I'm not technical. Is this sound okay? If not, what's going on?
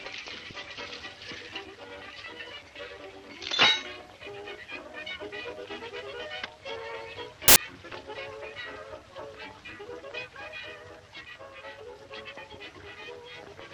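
No. At about 7.48 seconds there is a sudden blast of loud, harsh noise, lasting until about 7.56 seconds, less than a tenth of a second. This is a fault called samples built from the wrong bytes. Each tiny slice of digital audio is stored as a few bytes, and here they were pieced together in the wrong order or misaligned. The jittery fine detail became the main part of each value, which comes out as noise.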